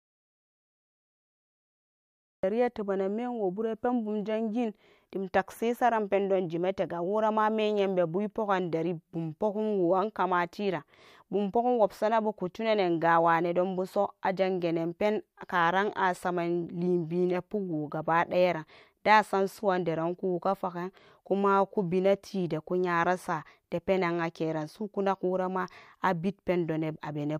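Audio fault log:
0.00–2.43 s, audio dropout to silence: the clip opens inside the dropout, which is already in progress, with digital silence and no room tone or noise floor. At 2.43 s the speech comes in abruptly, already in mid-flow, with no fade or onset. This is likely an input lost at the source, such as a disconnected device, a failed link or a mute, while the recorder kept writing zeros. Anything spoken during that span is gone.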